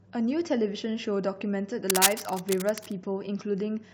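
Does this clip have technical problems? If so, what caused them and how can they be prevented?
Yes. Cable scratch noise runs from 1.90 to 2.92 s: dense, uneven crackling roughly as loud as the speech, likely from a worn cable or connector being moved. Replace worn leads and secure connectors before recording.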